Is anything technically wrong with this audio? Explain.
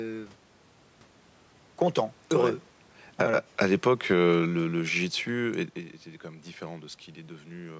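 Yes. The automatic gain control in the call chain makes two audible level adjustments, one overlapping the other.

Automatic gain falling runs from 2.27 s to 5.72 s. The gain control judged the input too loud and pulled its gain down gradually, by about 7 dB in total. The speech and the room noise behind it sink together over those three and a half seconds. That shared drop marks it as gain riding rather than the talker's own movement around 2.5 s and 5.5 s, which changes only the speech level.

Automatic gain rising occurs between 3.27 s and 4.19 s, inside the falling stretch. Here the controller briefly read the input as too quiet and pushed its gain back up by about 5 dB over roughly a second. Speech and background swell together, partly undoing the downward ride before the decline resumes. The result is an uneven, pumping level contour in the middle of the clip rather than a smooth fade.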